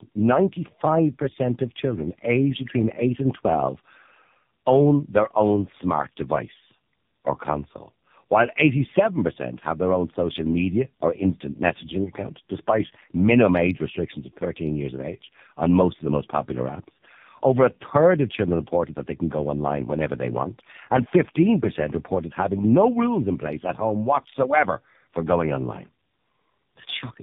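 Throughout the speech there is tandem speech coding. The call passed through two low-rate speech coders in a row, with a plain telephone link between them. The sound fits an AMR-NB stage near 6.7 kbit/s, then G.711, then AMR-NB again near 7.4 kbit/s. The second coder had to rework output the first had already damaged. The result is rough and muffled, with a warbly edge. Nothing is heard above 3.7 kHz.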